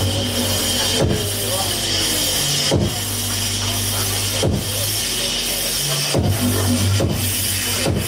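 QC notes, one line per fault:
Nothing stood out on listening to this clip.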